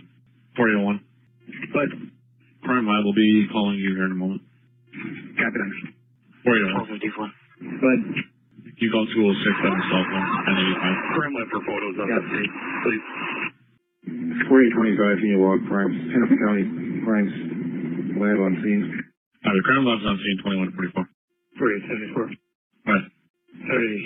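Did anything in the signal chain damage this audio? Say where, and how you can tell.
Yes. The damage happened on the Bluetooth LE Audio link, where lost LE Audio frames left a gap from 20.08 to 20.10 s. That is about 20 ms, which fits two lost 10 ms LC3 frames. The LC3 decoder covered the gap by replaying the last good spectrum with its signs scrambled at random. So for that moment the sound becomes a brief noisy smear instead of a dropout. The lossy codec itself adds only light damage.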